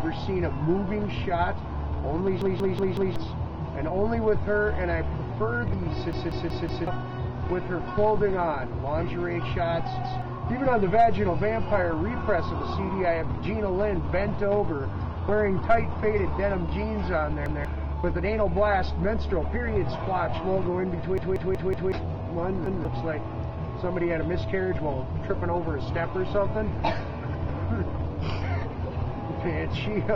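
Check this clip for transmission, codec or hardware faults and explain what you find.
Six buffer dropouts turn up as stutters.

Repeated buffer at 2.42–3.16, 6.13–6.87 and 21.18–21.92 s (a roughly 186 ms chunk played four extra times, losing about 0.7 s) and at 10.03–10.22, 17.46–17.65 and 22.66–22.85 s (one extra play, losing about 0.2 s). Fresh audio arrived late, so playback looped the last block, which fits an 8192-sample buffer. Each event sounds like a hard-edged stutter with an abrupt join at every repeat.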